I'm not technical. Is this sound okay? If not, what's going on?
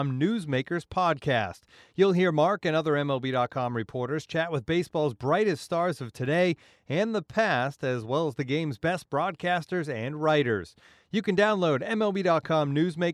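No, there's a single sharp click at 3.89 s, likely from dropped samples: a tiny sliver of the recording went missing. Unlike a dropout, no sound goes silent.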